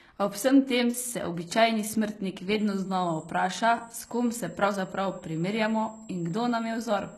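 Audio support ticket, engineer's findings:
Speech, whole clip. Sibilants gritty and lispy, plainly audible codec damage, nothing above 12.4 kHz. Likely HE-AAC compression, which fits a bitrate near 16 kbps. Spectral band replication rebuilds treble from copied lower bands; upper harmonics misalign.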